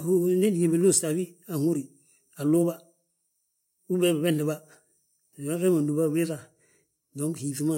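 No technical faults are audible anywhere in the speech recording.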